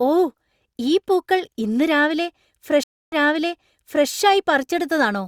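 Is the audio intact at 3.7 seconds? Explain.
No, 3.7 s falls inside a stream reconnect from 2.83 to 4.08 s: after "ഈ പൂക്കൾ ഇന്ന് രാവിലെ", the connection drops, goes silent for 287 ms, then a fresh decoder resumes 0.96 s earlier.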